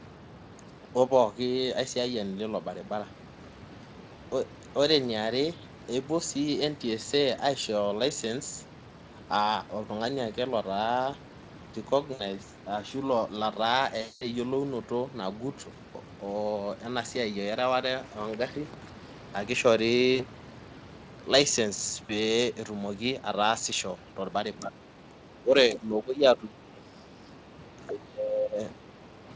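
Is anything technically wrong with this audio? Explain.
Yes, there are two kinds of fault.

VoIP packet loss concealed by the speech codec occurs at 12.13–12.22 s, 14.01–14.26 s, 20.15–20.22 s and 22.05–22.13 s, with gaps of 60, 200, 40 and 40 ms. Each one sounds like the sound stretching into a short, fading buzzy tone or coloured noise. Packets were dropped, and the decoder filled the gap by repeating its last pitch and spectral shape at falling gain. The sound stays weaker for a moment after the packets resume.

Speech suppressed in double talk occurs at 24.6–24.85 s, 25.06–25.23 s, 25.4–25.55 s, 25.71–27.54 s, 27.87–28.59 s and 28.79–29.23 s. Here the voice sinks and breaks up in patches, from a slight dip to a drop of roughly 20 dB in the longest stretches. The likely cause is an echo canceller that heard far-end audio at the same moment as the talker and turned down everything in the outgoing path to block what it took for echo.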